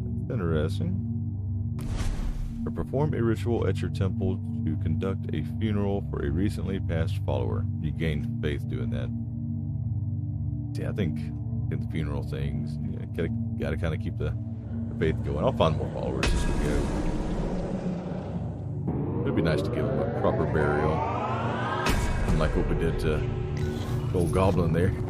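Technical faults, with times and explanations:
No technical faults can be heard anywhere in this audio. There is nothing here that needs a time or an explanation.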